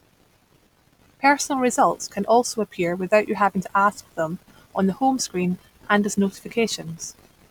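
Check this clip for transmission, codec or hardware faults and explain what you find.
No transmission, codec or hardware faults turn up anywhere in the recording.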